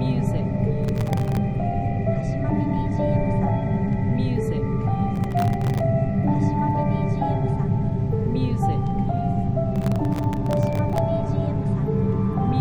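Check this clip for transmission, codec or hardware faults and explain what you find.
Three bursts of processor overload crackle occur, at 0.84–1.37 s, 5.16–5.80 s and 9.76–10.98 s. In each stretch the processor falls behind and misses dozens of very short buffer deadlines, which fits buffers of about 0.7 ms. Every missed buffer drops out to silence, so the sound is chopped into a gritty, tearing crackle until the load eases. A waveform shows a dense comb of tiny flat gaps with sharp edges, and a spectrogram shows vertical broadband streaks.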